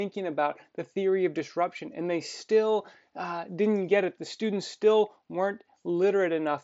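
No technical faults are audible anywhere in this speech.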